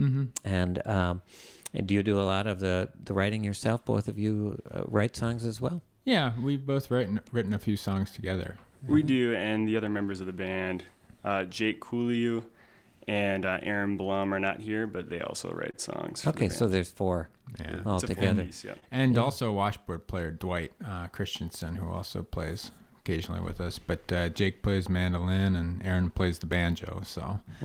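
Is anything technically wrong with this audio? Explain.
Yes. Three related timing faults are audible.

Clock drift between sender and receiver runs through the whole clip. The sender's clock runs roughly 2% slower than the receiver's, so the receiver's buffer keeps draining and the playback has to be continually nudged to stay in step, leaving a faintly unsteady pace.

Repeated timing corrections run from 0.33 s to 27.35 s. To make up for the slow sender, the receiver keeps repeating small slices of audio, giving an effective speed of 98% and adding around 0.4 s overall. Each insertion is tiny and unevenly spaced, heard as slight hiccups or a wavering tempo.

A short stall from a late packet occurs three times: 15.71 to 15.76 s, 18.79 to 18.84 s, and 21.36 to 21.41 s. Each time a packet arrived late and the buffer ran dry, so the receiver held the last sound for 25 to 28 ms before resuming where it left off. 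Nothing is lost, but each spot has a brief held sound with a slight buzz or dip.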